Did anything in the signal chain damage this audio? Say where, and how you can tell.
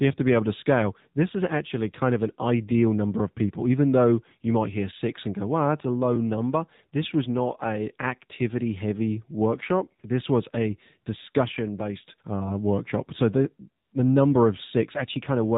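Yes. The codec stage damaged it: the whole clip went through the AMR narrowband mobile codec, which fits a low AMR-NB mode near 7.4 kbps. Nothing passes above 4 kHz, and the speech has a plainly audible buzzy, synthetic quality from the pulse-driven vocal-tract model.

At 13.84 to 13.92 s, just before "the number", there is AMR comfort noise. The phone's silence detection stopped sending speech frames for about 80 ms, and the receiver filled the gap with smooth synthetic noise that switches in abruptly and replaces the real background.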